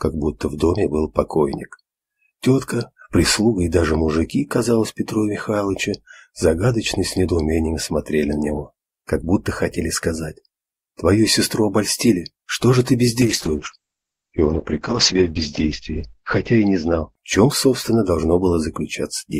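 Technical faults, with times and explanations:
13.23–18.45 s, call bitrate drop: the top end falls from 20 kHz to 8 kHz and the sound turns rough and watery, worst for 2.16 s, consistent with the encoder starved to roughly 8 kbps. Unlike packet loss, there are no gaps.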